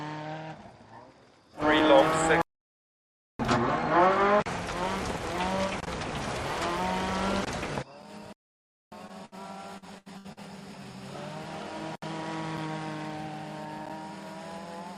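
At 2.42 s the sound cuts to silence for about 0.98 s, then resumes at 3.39 s; at 8.33 s it drops out again for 0.59 s, until 8.92 s. These playback stalls are true silences, most likely the player starving for data or its thread blocking, unlike the brief held-over sound of a late packet. Two short stalls from a late packet follow: at 9.07 s the last sound is stretched for 19 ms, and at 9.25 s for 69 ms, each time picking up exactly where it left off with nothing lost, heard only as a slight hold or buzz rather than a gap. From 9.78 s to 10.40 s, repeated packet loss gives a choppy, robotic stretch: four holes, the longest 76 ms, are patched by repeating prior sound, covering about 37% of that span, and 200 ms of audio is missing outright.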